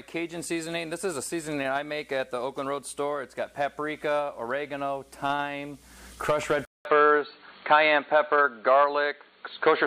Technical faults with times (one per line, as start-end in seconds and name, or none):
6.65-9.86 input switched to a poorer device